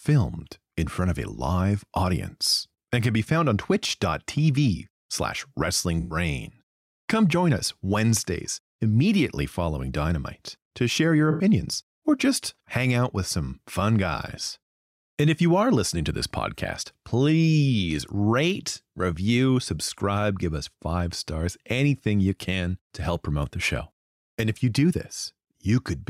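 A speech clip with two brief smeared, noisy patches, at 6.0 to 6.16 s and at 11.31 to 11.43 s (after "to share your", before "or just hang out"). This is AAC frame loss with concealment: the decoder filled the roughly 107 ms and 85 ms gaps by reusing the last good spectrum.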